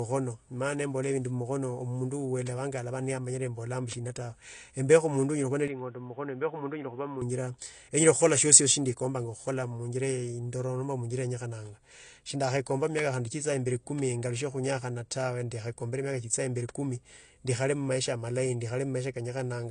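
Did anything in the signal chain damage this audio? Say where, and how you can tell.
Yes. At the codec stage, the whole clip is an MP3 with nothing above 9.8 kHz, a ceiling a true high-bitrate encode wouldn't impose. That points to low-bitrate audio saved at a high bitrate, likely an earlier encode around 32 kbit/s, whose losses the re-encode preserves. A steady, clip-long cut-off fits a codec better than a mid-clip device change.

At the input or driver stage, from 5.68 to 7.22 s the band stops at 3.8 kHz, the level falls about 5 dB, and a new noise floor sits about 30 dB below the signal, with no gap at the switch. That fits an input switched to a poorer device, likely another microphone or a headset's call profile. Its own noise and level step distinguish it from a codec cut-off.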